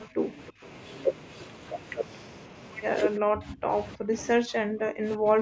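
The speech dips sharply at 0.06–0.17 s, 0.36–0.63 s, 3.18–3.72 s, 3.96–4.14 s and from 4.43 s to the end, falling by roughly 25 to 40 dB. It is likely speech suppressed in double talk: the echo canceller mistook the talker for echo and turned both down. On the waveform the envelope collapses to near-silence; on the spectrogram the harmonics fade or break into fragments, within the call's band that stops at 8 kHz.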